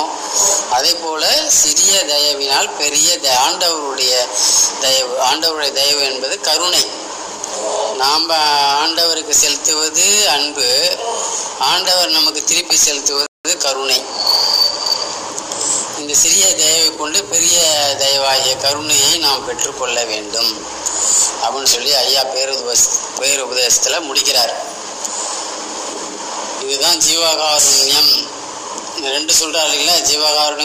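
At 13.26 s the sound just drops out to silence, and at 13.45 s it picks up again exactly where it left off. That's a rebuffering stall: the player used up the audio it had downloaded and had to sit and wait for more to arrive before carrying on. Nothing gets skipped, so you don't lose any material. You just get an extra 184 ms of dead air wedged into the middle of the clip.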